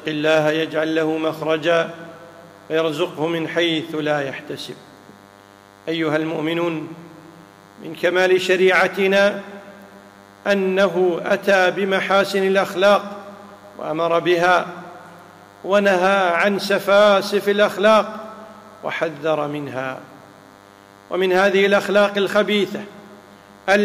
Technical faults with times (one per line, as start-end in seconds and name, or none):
0.00-23.84 DECT cordless phone buzz